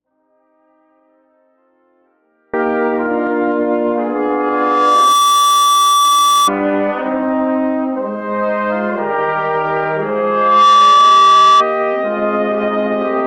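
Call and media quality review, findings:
Audio dropout to a faint residue, 0 to 2.54 s, already under way at start. Signal absent, only a faint leak about 40 dB down remains, so the downstream path is live. Likely an upstream source or link loss. Abrupt return, not a fade-in.

Loudspeaker feedback squeal, 4.15 to 6.51 s. Single 1.2 kHz tone swelling over about a second to roughly 5 dB above the program. Mic-to-speaker loop gain above unity at that frequency. A steady pitch that grows by itself, unlike broadband distortion.

Second feedback squeal, 9.98 to 11.66 s. Same 1.2 kHz howl, faster onset of about 0.7 s, peaking around 10 dB over the signal. Recurs at the identical frequency, pointing to the same acoustic loop.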